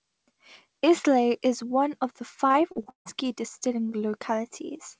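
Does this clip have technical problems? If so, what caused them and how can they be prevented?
Yes. From 2.48 to 3.07 s the speech turns choppy and robotic, with several dropouts up to 157 ms long. This is repeated packet loss: each hole is filled by stretching the last sound, covering 43% of that span. Forward error correction and a deeper jitter buffer would prevent it.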